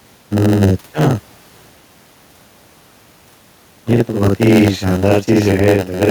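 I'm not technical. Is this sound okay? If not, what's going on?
No. Three problems run through the whole recording.

Channel delay (doubling): one of the two channels arrives about 46 milliseconds late, which fits a 2048-sample buffer, and the two are mixed together. So every syllable is heard twice, close together, giving a doubled, echoey voice.

Gain pumping: the level is most likely set far too high, and an automatic limiter keeps pulling it down whenever the speech gets loud. Loud and soft parts end up closer in level, so the speech sounds squashed.

Block size mismatch (padded): one part of the system hands over audio in pieces slightly too short for the next part, and the gaps are filled with silence. Those tiny gaps make a low buzz at about 92 Hz, and the speech plays at 0.919 times normal speed.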